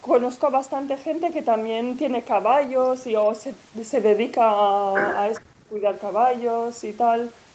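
Echo leak appears in this speech clip from 5.34 to 5.41 s: a brief, faint scrap of delayed voice, trailing the original by about 404 ms and sitting roughly 20 dB below the main speech. The likely cause is a far end on loudspeaker whose echo canceller failed to strip everything its microphone caught, so a short remnant of the outgoing audio was returned down the line. Speech suppressed in double talk follows from 5.43 to 5.84 s, where the talker's voice collapses by as much as around 40 dB across roughly 0.4 s. This likely happened because both ends were speaking together, and the echo canceller, unable to separate the near talker from the returning echo, pushed the whole signal down. The band stopping at 8 kHz reflects the call's normal microphone processing.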